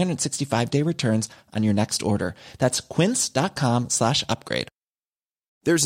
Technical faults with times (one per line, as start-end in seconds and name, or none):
none